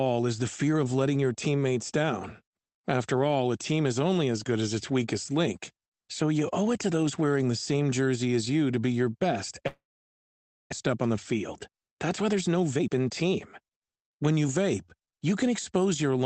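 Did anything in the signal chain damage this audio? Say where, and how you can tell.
Yes. After "to be your best", from 9.67 to 10.74 s, a long network dropout is likely: a fading concealment buzz, then silence, and 0.6 s of audio never returns, unlike a clean mute.

From 10.9 to 14.45 s, a jitter buffer speed-up plays the audio at 112% speed, trimming about 0.4 s. The pitch stays unchanged, which rules out a resampling error.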